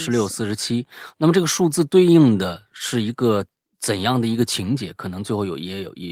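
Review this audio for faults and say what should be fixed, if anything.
Clock drift between sender and receiver: the sender's audio clock runs about 1.5% slower than the receiver's, so the jitter buffer keeps draining across the whole speech clip. The receiver has to fill the shortfall, which leaves the timing faintly unsteady from start to finish, with small hiccups at uneven intervals rather than one clean break. To prevent it, lock both ends to a common clock or run adaptive resampling that tracks the measured rate difference.

Repeated timing corrections: from 0.42 s to 5.76 s the receiver keeps repeating short pieces to make up for the slow sender, all in the same direction but unevenly spaced. Together they stretch the passage to about 99% speed and add roughly 70 ms overall. The result is a slightly dragging, uneven tempo with faint stutters rather than any obvious glitch. To prevent it, replace discrete repeat-and-cut edits with smooth, continuous sample-rate adjustment driven by the buffer level.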